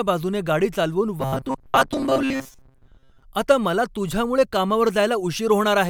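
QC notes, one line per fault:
1.21–3.23 s: robotic sound from repeated short buffers. After "गाडी चालवून" the speech turns into a rigid, metallic buzz at 133 Hz. It still loosely follows the speech and clears before "आता मला तुझ्यामुळे कामावर". The likely cause is audio arriving too seldom, so a stretch of about 7.5 ms is replayed again and again. Roughly 70% of the span is repeated material. The real audio in those gaps is lost. Each cycle imposes a fixed pitch.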